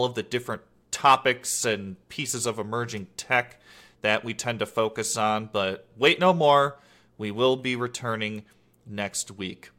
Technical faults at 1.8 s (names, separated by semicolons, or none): none